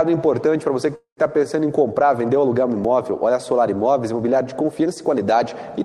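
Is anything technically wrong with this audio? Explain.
Yes, there are two separate faults.

A call audio freeze runs from 0.95 to 1.20 s, most likely caused by packets stalling in transit until the receiver's jitter buffer emptied. The receiver stretched the last sound into a fading buzz or hiss that sinks into about 110 ms of silence. When the packets resume, the sound picks up exactly where it stopped. Nothing is lost, but everything after this point now runs roughly 217 ms late.

A dropped buffer (overrun) occurs at 2.85 s. The likely cause is that the software failed to read its samples before the hardware wrote over them, discarding a few milliseconds of audio and splicing the surrounding material together. There is no silence. Instead you hear a small forward jump in the sound.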